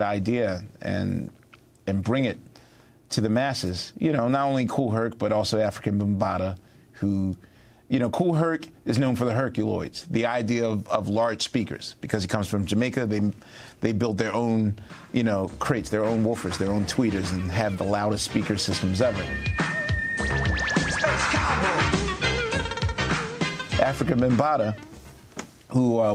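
No technical faults can be heard anywhere in the clip. Nothing cuts out, distorts or breaks up at any point.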